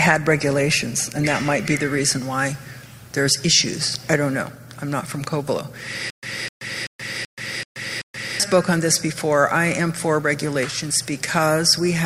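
The audio opens with an adaptive stream starting at a low bitrate. From 0.0 to 2.0 s the treble is thin and smeared with codec artefacts, and it then steps up abruptly with no gap. This fits a switch from about 32 to 64 kbit/s Opus once the connection was measured. From 6.10 to 8.40 s there is a stutter with silent gaps: a 255 ms burst repeats six times, each followed by about 128 ms of digital silence, on a steady 383 ms cycle. The audio that should fill that span is gone, likely because the stream stalled and replayed its last fragment at each retry.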